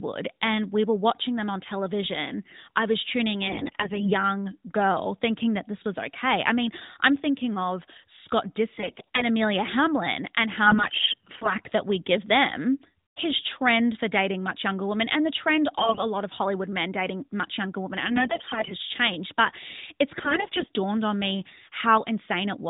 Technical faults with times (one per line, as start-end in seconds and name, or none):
3.48-4.13 AMR bit errors
8.78-9.24 AMR bit errors
10.66-11.53 AMR bit errors
15.78-16.03 AMR bit errors
18.10-18.75 AMR bit errors
20.12-20.70 AMR bit errors